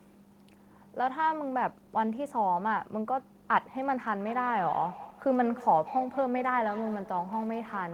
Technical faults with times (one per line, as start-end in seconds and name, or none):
4.19-7.93 feedback echo between two devices